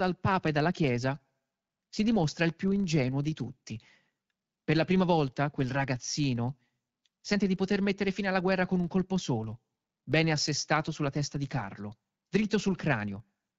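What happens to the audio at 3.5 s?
At 3.5 s the filter restarted on every block is audible: each block starts from silence, leaving a 25 Hz buzz that follows the speech level throughout.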